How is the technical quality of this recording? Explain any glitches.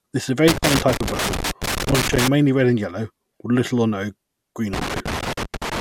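The recording's technical quality is compromised by two kinds of fault: intermittent loose connector crackle and a short patch of DAB burbling.

Loose connector crackle appears from 0.48 to 2.28 s and again from 4.73 s to the end of the clip. A worn or dirty contact keeps opening and closing as it shifts, chopping the signal and adding pops where DC sits on the line. It sounds like ragged, irregular scratching over the speech. A waveform shows clusters of sharp spikes and brief dropouts. A spectrogram shows scattered vertical broadband streaks.

DAB burbling runs from 1.08 to 1.35 s, inside the first crackle burst. Weak reception let bit errors slip past error correction into the compressed MP2 data, so corrupted samples put short blips of noise in single sub-bands and corrupted scale factors made individual sub-bands jump in level for up to a frame. The damage spans about a dozen frames, which points to a bit error rate of a fraction of a percent. 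It sounds like burbling blips of noise. On a spectrogram it shows as blocky, frame-length patches of isolated bands flaring or vanishing.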